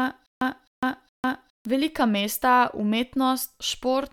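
Speech clip, and it opens mid-stutter with silent gaps: from 0.0 to 1.65 s, a 0.26 s burst replays three times, each followed by about 0.15 s of dead silence, every 0.41 s, before "velika mesta" plays through. Likely a stalled stream re-serving its last fragment, losing the audio between.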